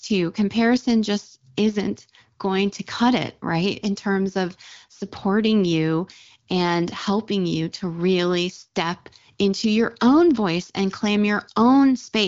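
No technical faults are audible.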